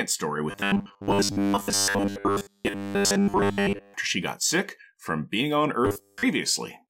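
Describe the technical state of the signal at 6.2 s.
At 6.2 s the speech is inside robotic sound from repeated short buffers, 5.85 to 6.23 s, just after "sick from being on". A rigid 100 Hz buzz is imposed on the speech, likely from a 10 ms buffer replayed while newer audio is skipped. Unlike a dropout, the sound never goes silent.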